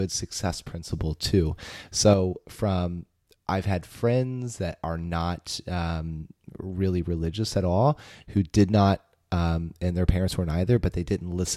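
It's a speech clip with a sudden gain jump: at 0.91 s the level steps up by about 6 dB, speech and background noise together, and drops back at 2.14 s, just before "from I've had friends". That's likely a gain change applied with no ramp.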